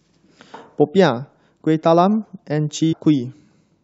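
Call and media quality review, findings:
Compressed frames skipped, 2.91–2.94 s. Speech jumps forward about a fifth of a second, roughly ten frames. The 23.2 ms frame length fits a 1024-sample codec frame at 44.1 kHz. Probable component is the decoder or the transport feeding it: frames missing from the stream or rejected as corrupt, with no concealment.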